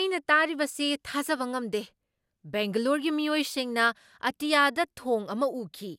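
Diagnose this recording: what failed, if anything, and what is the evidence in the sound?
Codec stage: the speech sounds swirly, smeared and hollow throughout, with blurred attacks and nothing above 16.7 kHz, more damage than one pass would cause. Generation loss, likely from about four MP2 passes.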